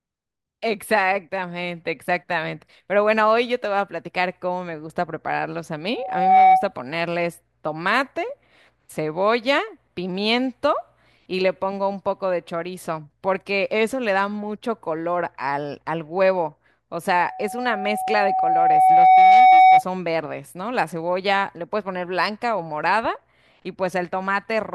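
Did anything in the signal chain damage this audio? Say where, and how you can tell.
Yes: a 753 Hz tone swells into loudspeaker feedback squeal at 5.93–6.73 s and 17.18–19.84 s. The microphone is picking up its own loudspeaker, with loop gain above one there.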